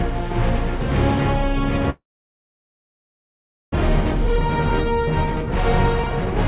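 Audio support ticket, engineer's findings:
Long network dropout, 1.9 to 3.76 s. The sound breaks off, a brief fading tail is left, then about 1.7 s of silence. Playback resumes with roughly a second of material gone. The likely cause is a packet stream gap that receiver concealment covered. It differs from a local glitch or clipping because the content skips forward instead of just pausing, and the delay grows by somewhere around 0.7 s.

Jitter buffer speed-up, 3.78 to 6.47 s. Right after recovery the sound runs about 115% fast but keeps its pitch. The receiver drains excess buffered delay by cutting short pitch-period slices repeatedly, about 0.4 s in total. It differs from a sample-rate mismatch because pitch stays put. The G.711 mu-law band stops at 4 kHz throughout.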